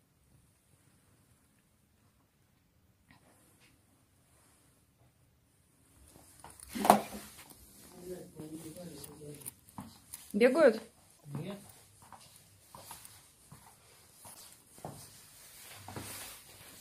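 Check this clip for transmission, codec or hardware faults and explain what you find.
Two short faults are present, both damaged data in a compressed stream. The first runs from 11.14 to 11.25 s and the second from 14.30 to 14.41 s, each lasting about 0.1 s. In both places the encoded bytes are corrupt, so the decoder misreads or rejects those frames, loses frame sync, and scans ahead for the next valid header. The result is a brief chirp, squawk, click or short hole that breaks into the surrounding audio before normal decoding resumes.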